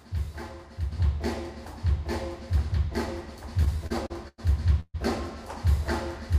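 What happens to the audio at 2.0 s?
At 2.0 s the audio sits inside a sudden gain jump that begins at 0.92 s and lasts to the end of the clip. At that onset the level steps up by about 5 dB from one sample to the next, with no fade. The likely cause is a digital gain setting or bit shift applied without ramping. The sound and its background noise rise together, so at 2.0 s everything is uniformly louder than before the step.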